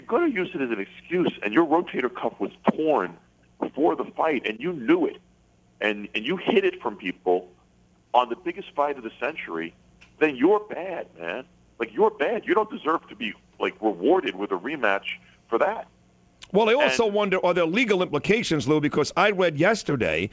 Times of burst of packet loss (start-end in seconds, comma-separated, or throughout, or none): none